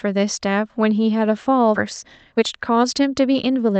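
Skip ahead at 1.75 to 1.77 s: a stretch of about 0.7 s of speech never reaches playback, dropped in transit or discarded when an overfull jitter buffer threw it away. Nothing fills the gap, so the speech jumps straight forward and the two sides butt together almost seamlessly.

Jitter buffer speed-up from 1.95 to 3.76 s: with too much audio queued, the receiver repeatedly cuts out short pitch-period-sized slices to shrink the delay, removing roughly a third of a second in total. The speech runs at about 115% speed with unchanged pitch and sounds rushed, all heard through the call codec's coding noise and an upper limit of about 8 kHz.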